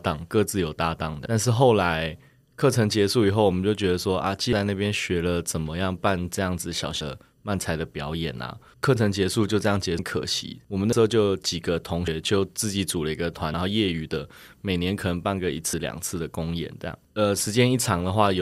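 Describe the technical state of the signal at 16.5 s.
At 16.5 s the speech signal is intact, with no fault present at that moment.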